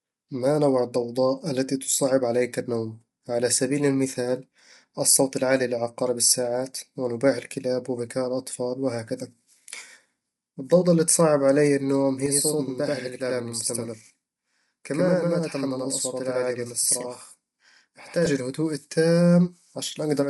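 Low-delay AAC compression runs throughout: the speech sounds rough and grainy, with noise between harmonics and nothing above 11.6 kHz, likely from AAC-ELD at a low bitrate around 32 kbps. Channel delay (doubling) follows from 12.26 to 18.26 s, just after "اللي تصعب علي النوم". One channel arrives about 85 ms late, which fits a 4096-sample buffer, and the mono sum makes the speech sound doubled.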